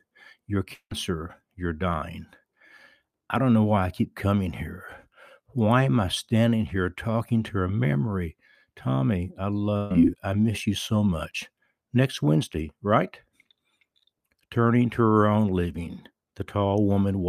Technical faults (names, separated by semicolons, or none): long network dropout; burst of packet loss